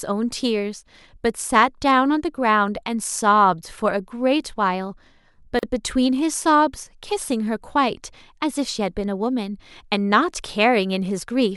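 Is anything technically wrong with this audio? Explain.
Yes. At 5.59 to 5.63 s the speech drops into a gap at a join of encoded pieces, a gap of about 39 ms with smeared edges, so the silent part is shorter. Separately encoded segments were spliced untrimmed, leaving encoder start delay and end padding, before the speech resumes where it stopped.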